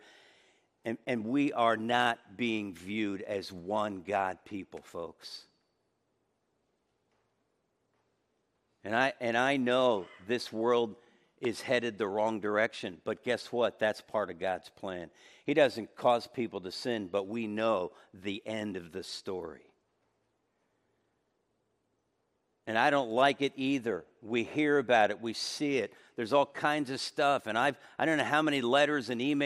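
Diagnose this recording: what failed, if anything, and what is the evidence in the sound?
Nothing here points to a failure at any stage, so there's really nothing to diagnose in this speech recording.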